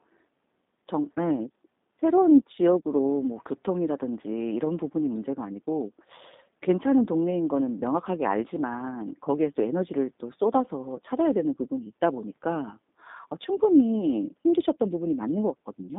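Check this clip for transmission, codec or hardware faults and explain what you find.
One fault is present for the entire clip: G.729 codec coding. The speech is confined to 200 Hz–3.7 kHz and sounds rough and synthetic, because it is rebuilt from a vocal-tract filter, a pitch predictor and sparse pulses. This fits an 8 kbit/s G.729A stream. Plain telephone band-limiting would narrow the sound without this buzzy, resynthesised texture.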